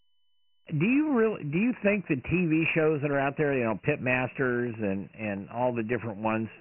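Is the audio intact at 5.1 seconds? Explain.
No. The sound at 5.1 seconds falls inside a train of clicks running from 4.67 to 6.28 s. About 4.4 sharp ticks per second arrive at an uneven pace, roughly seven in all. Their peaks sit about level with the speech. They likely come from electrical interference or a struggling interface injecting repeated pulses.

The whole clip also carries Dialogic VOX ADPCM damage, heavy at this moment too. This coarse 4-bit telephony coding leaves nothing above 2.9 kHz, which fits a 6,000-sample-per-second rate at 24 kbps. The speech sounds dull and band-limited, with gritty hiss trailing it.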